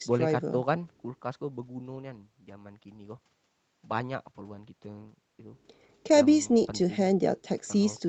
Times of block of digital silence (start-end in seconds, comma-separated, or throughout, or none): none